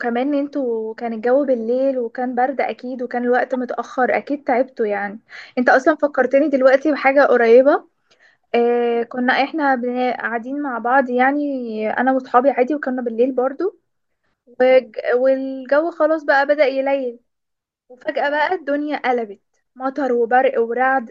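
A short glitch breaks into the speech at 3.54 s, peaking around -20 dBFS: a corrupt frame decoded, where flipped bits in one compressed frame scattered energy into the wrong frequencies.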